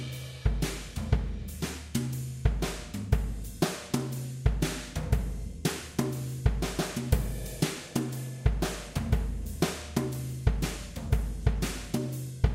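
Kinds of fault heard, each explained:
No faults detected in this audio.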